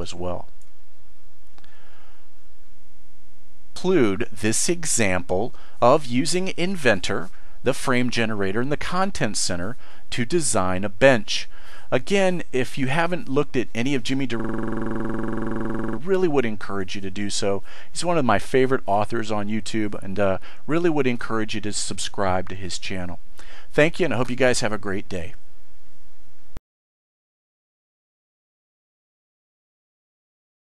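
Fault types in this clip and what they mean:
System hang loop: with the system frozen, the hardware kept replaying one buffer, so a 46 ms fragment, fitting a 2048-sample buffer, stutters at 21.5 Hz from 2.79 to 3.76 s and 14.40 to 15.98 s. Waveform: identical repeating blocks; spectrogram: evenly spaced vertical stripes.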